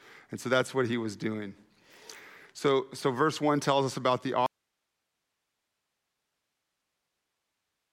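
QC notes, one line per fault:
4.46 s to end: audio dropout to a faint residue. Right after "tells us about the", the speech cuts off abruptly and only low hiss, roughly 55 dB below the speech, remains. The likely cause is a lost signal feeding a still-live path. Unlike a pause, the hiss persists, and unlike a fade, the cut is instant.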